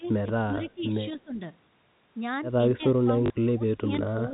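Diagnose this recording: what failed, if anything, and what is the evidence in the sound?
Call processing, likely the echo canceller's double-talk handling, pulled the near-end speech down while both sides talked. The level dips by roughly 15 to 25 dB in five stretches: 0.0–0.98 s, 1.17–1.41 s, 2.74–2.82 s, 3.03–3.91 s, and 4.12 s to the end.

An echo leak, likely from the same call-processing stage, let loudspeaker pickup escape cancellation. From 0.04 to 0.08 s a faint delayed copy of the speech, about 35 dB below it and lagging by 277 ms, slips through and is sent back.

On the network side, packet loss with the last packet repeated fills a 40 ms gap at 3.26–3.30 s, which fits two lost 20 ms packets. The replayed audio gives a brief robotic stutter.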